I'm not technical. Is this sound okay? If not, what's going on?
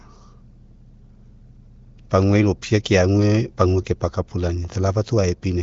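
Yes, nothing has gone wrong with this speech recording. It has the slightly trimmed top end of an HD Voice phone call carried by the AMR wideband (HD Voice) codec, with nothing above about 7 kHz.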